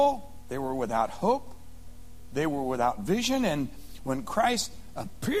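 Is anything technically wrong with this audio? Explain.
No, nothing technically wrong stands out here; the audio sounds steady and intact all the way along, with nothing that catches the ear.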